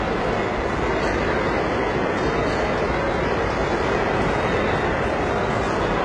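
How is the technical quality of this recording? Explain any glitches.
The technical quality is poor: heavy compression damage runs through the whole recording.

HE-AAC compression, throughout the clip. The likely cause is this codec: it encodes only the lower spectrum and synthesises the treble by copying lower bands upward under a coarse envelope. Here the damage is heavy, which fits a very low bitrate of around 12 kbps, and nothing survives above 11 kHz. The rebuilt upper range keeps some brightness, but its harmonics don't match the bands below, so the treble sounds gritty and metallic.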